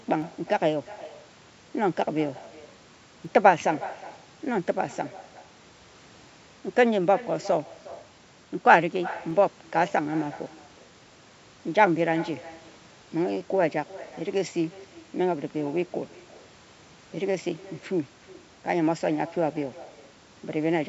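From the start, the speech carries an echo with no canceller: a quieter, thinner copy trails each phrase by roughly 0.4 s, about 18 dB below the talker. The far end's loudspeaker is feeding its microphone, and nothing strips that return path.

From 0.22 s to 18.41 s, a short click recurs every 3.03 s while speech is present. These are likely clock drift buffer slips: two clocks disagreeing by roughly 70 ppm let the buffer creep until a handful of samples is dropped or repeated. The call microphone processing is audible as content stopping at 8 kHz.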